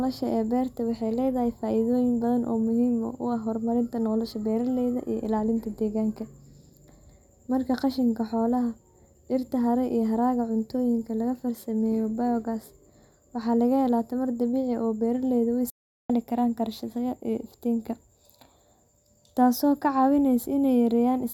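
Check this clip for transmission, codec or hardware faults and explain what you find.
One fault stands out in the speech, a playback stall. At 15.7 s the sound cuts off mid-flow and stays silent for about 0.39 s, resuming at 16.1 s with "karaan karsashada iyo iftiinka". The likely cause is the player running short of buffered data or being blocked until it recovered. On a waveform this shows as a flat line; the spectrogram has a blank vertical band across all frequencies.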